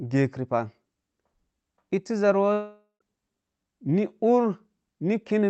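From 2.53 s to 3.02 s the speech dissolves into a buzzy, fading smear, then sits in near-silence for about 0.13 s before resuming with roughly half a second of sound missing. This is likely a long network dropout, the receiver stretching the last audio over the gap.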